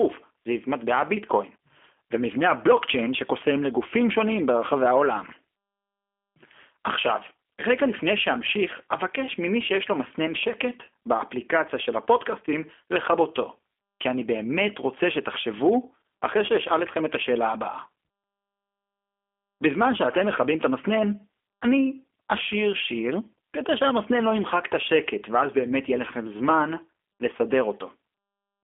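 Throughout, the speech carries G.729 codec damage, plainly audible. The sound fits an 8 kbit/s G.729A link. Each 10 ms frame is rebuilt from a vocal tract filter, a pitch predictor and a few pulses. The result sounds rough and synthetic. Nothing passes above 3.6 kHz, and the band sits roughly between 250 Hz and 3.4 kHz.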